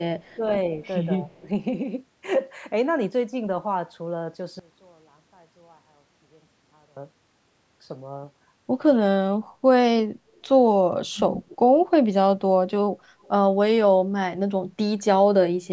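A loudspeaker-side echo canceller likely let its pickup through: echo leak puts a faint copy of the speech about 129 ms late at 0.2–0.86 s (about 30 dB down), 10.35–10.4 s, 11.51–11.86 s (about 25 dB down) and 13.22–13.28 s, heard as a trailing echo. The same canceller likely mistook talker for echo during overlap, so speech is suppressed in double talk at 0.37–1.46 s (dipping about 15 dB), 8.93–9.09 s, 11.11–11.56 s and 13.56–13.8 s, where the speech drops by roughly 30 to 35 dB.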